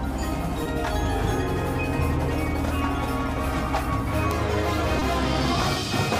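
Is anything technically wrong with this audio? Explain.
Yes, there are two short concealed packet losses, at 0.63–0.67 s and 4.99–5.03 s. Each time, about 20 ms of audio failed to arrive and the receiver filled the gap by extending the preceding sound before blending back. It is heard as a brief smear or wobble. On a spectrogram, harmonics or noise run smoothly and unnaturally through the patch.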